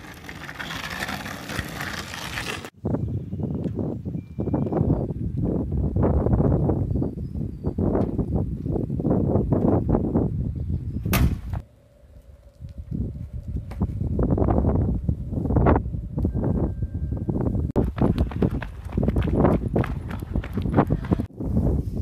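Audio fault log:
2.42–4.78 s, wrong sample rate: sound runs 1.5 times fast and about 7 semitones high, which fits 32 kHz material played back at 48 kHz unconverted.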